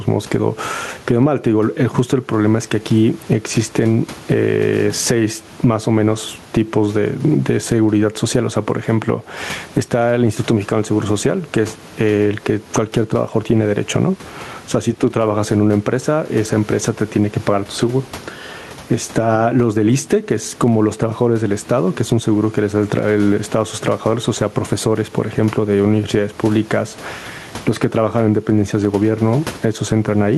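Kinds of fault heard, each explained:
Gain pumping: throughout the speech, with the room background about 32 dB below the voice, the gain is pulled down each time the talker gets loud, a swing of roughly 15 dB. Loud and soft syllables end up squashed toward one level. The likely cause is microphone gain set far too high, with a fast limiter or compressor clamping it. Unlike a noise gate, this does not cut the background out.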